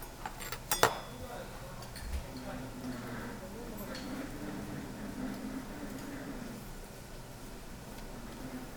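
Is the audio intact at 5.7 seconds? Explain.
Yes, the audio is intact at 5.7 seconds, with no fault present at that moment.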